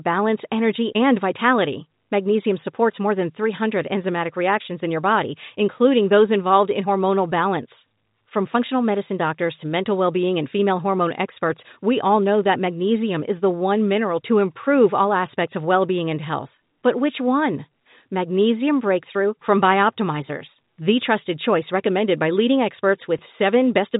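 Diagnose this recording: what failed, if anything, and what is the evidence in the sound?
Nothing stood out on listening: the speech carries the band limit of G.711 telephone coding, with nothing above 3.8 kHz, and no failure at any stage could be heard.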